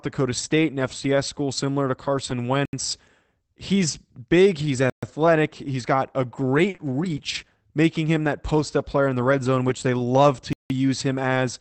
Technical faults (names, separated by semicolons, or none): block of digital silence; short stall from a late packet; lost packet rebuilt from error correction